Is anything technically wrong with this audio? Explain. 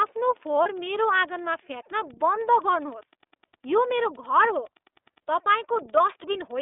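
Yes, there are two faults. The whole clip passes through the iLBC codec. The speech is confined to about 300 Hz to 3.6 kHz and sounds a little rough and synthetic, which is typical of iLBC, here in its 30 ms frame mode.

From 0.63 to 0.67 s there are lost iLBC frames. About 30 ms of audio is missing. The decoder repeats the last pitch cycle with added noise, giving a brief buzzy held sound before the speech recovers at once.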